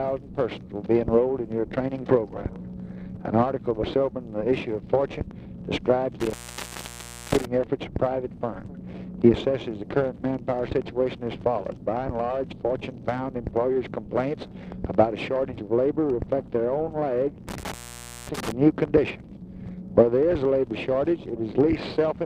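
At 6.20 s and again at 17.49 s the sound cuts out with crackle at the edges of each gap and hiss underneath, for about 0.99 s and 0.54 s. This is intermittent contact: a loose cable or plug briefly opening the signal line.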